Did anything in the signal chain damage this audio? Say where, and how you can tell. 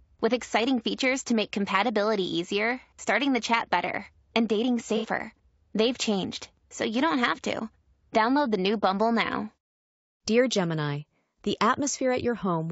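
Yes. Low-delay AAC compression runs through the whole clip, at the codec stage. The speech sounds rough and grainy, with a hiss-like fill between the voice harmonics and a top band that feels thin and synthetic. That points to the low-delay AAC used in video calls, likely AAC-ELD at a low bitrate of around 32 kbps. Its short frames resolve pitch harmonics only coarsely, and at that bitrate the encoder has too few bits, so the damage is plainly audible.

AAC frame loss with concealment appears from 4.97 to 5.06 s, just after "chat better and dating", at the network or codec-decoding stage. For about 60 ms the sound turns briefly smeared and noisy, losing its clear harmonic structure. The gap fits two dropped frames. The decoder rebuilt them from the last good spectrum, with scrambled phase or interpolated energy, so the hole comes out as a blurred patch, not silence.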